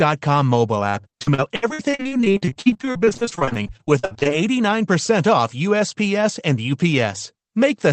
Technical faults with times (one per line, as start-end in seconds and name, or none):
0.89-4.27 repeated packet loss (robotic sound)